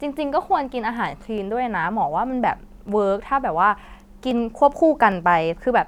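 Dropped samples at 1.38, 2.89 and 5.12 seconds: each is a single sharp click with a thin vertical streak across the spectrum. The likely cause is a fraction of a millisecond missing from the stream, so the waveform jumps abruptly to a later value.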